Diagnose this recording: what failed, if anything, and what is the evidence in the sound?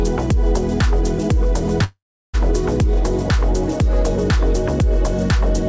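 Call audio freeze at 1.84–2.36 s, in the network and jitter-buffer stage: the sound stretches into a fading fill, then goes silent for 0.35 s before resuming exactly where it stopped. Late packets likely drained the buffer, inserting a 0.5 s gap.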